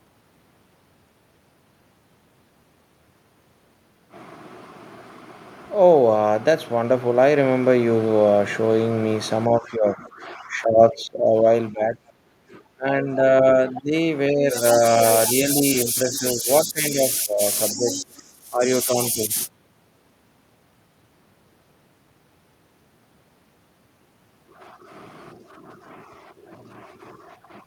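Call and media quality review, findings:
Speech suppressed in double talk, 9.49–12.13 s, 12.75–13.93 s, 14.32–15.01 s, 15.34–19.36 s. Likely echo canceller misjudging near-end speech as loudspeaker echo while both ends talk, attenuating the mic path. Near-end speech dips about 15 dB in the first two spans, a shallow about 5 dB at 14.32 s, and up to about 25 dB in the last. Affected portions add up to roughly two seconds, then a few hundred ms each, then roughly three seconds. Level sags and parts of syllables drop out while the far side speaks.

Background gated by the echo canceller, 12.41–12.47 s. Suppressor clamped the microphone hard during loudspeaker playback, then released. Room tone drops about 16 dB for roughly 70 ms, a brief hole in the noise floor that restores as soon as the gate lets go.

Other side's voice leaking through, 13.75–13.81 s, 16.12–16.18 s, 17.76–18.01 s. Likely residual loudspeaker echo left in the mic signal after cancellation. 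Far-end voice comes through in short scraps, around 20 dB below the main talker, the first two barely 60 ms, the last about a quarter second. Faint second voice audible under the near-end speech, overlapping the double-talk suppression spans.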